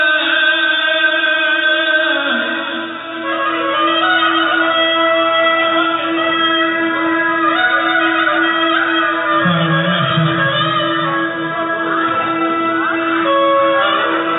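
No faults to report: the audio runs over an ordinary WebRTC call path, with the band stopping at 4 kHz, which fits G.711 mu-law narrowband coding.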